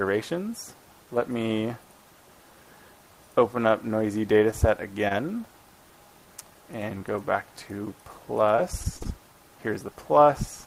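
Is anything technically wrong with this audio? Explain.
Yes. There is short concealed packet loss at 5.08–5.12 s and 6.98–7.02 s. Each time, about 20 ms of audio arrived too late to decode, and the receiver filled it by extending the preceding sound before blending back. Each event is a brief smear or wobble.

Repeated packet loss (robotic sound) runs from 8.56 to 9.07 s. The stream drops out in what sounds like four short gaps, the longest about 39 ms, each patched by continuing the last sound. Together they give a choppy stretch with pieces missing.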